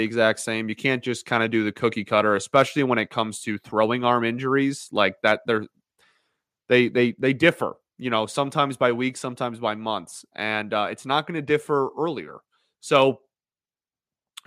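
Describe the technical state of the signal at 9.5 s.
At 9.5 s the speech signal is intact, with no audible technical fault.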